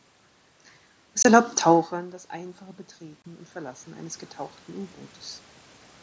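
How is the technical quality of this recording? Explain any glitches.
There are two kinds of glitch: a pair of short dropouts and a slow level swell.

Unconcealed Bluetooth headset packet loss hits at 1.23 s and 3.22 s. Each is a hard-edged hole of about 22.5 ms, which fits three lost headset voice frames. The link filled each gap with silence or an idle pattern instead of patching it, so you hear a quick chop.

Automatic gain rising runs from 1.89 s to 5.0 s. The level had dropped by about 19 dB, around when the talker moved back near 1.5 s. The gain control answered by slowly adding about 9 dB, so the voice and room noise swell up together.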